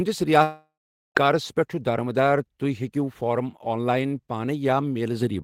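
This is a speech clip with a long network dropout. At 0.43 s the sound turns into a buzzy continuation of the last moment and fades away. About 0.44 s of silence follows. Normal audio returns at 1.17 s. Roughly 0.72 s of the original is simply gone. This is likely a stall in the network stream, with the receiver padding the gap until packets resumed.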